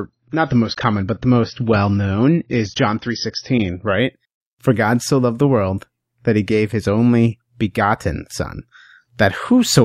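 Speech. An adaptive stream starting at a low bitrate: until 4.0 s, nothing sounds above 6.5 kHz, with heavier artefacts. Then quality jumps without a gap, which fits a step from about 24 to 96 kbit/s AAC.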